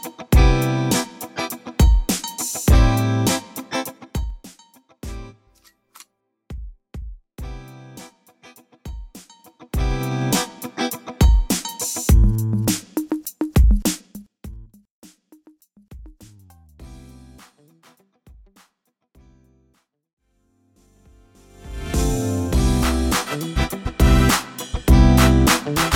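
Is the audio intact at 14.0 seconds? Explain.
No. At 14.0 s the sound is mid-fade under zipper noise, running from 13.88 to 14.54 s. The level drops roughly 25 dB in 2 dB steps, about twenty a second, with no smoothing. Each step clicks, so a fast ticking rides on the fade.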